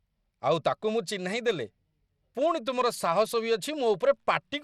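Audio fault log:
throughout: Bluetooth SBC compression, likely behind the plainly audible gritty noise riding on the speech, with an unsteady top end and nothing above 16.9 kHz. The coarse grain fits a bitrate near 96 kbps, and it sets this apart from a plain low-pass filter, which would dull the treble cleanly.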